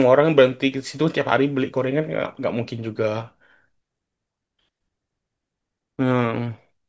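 Nothing stood out on listening to this speech recording.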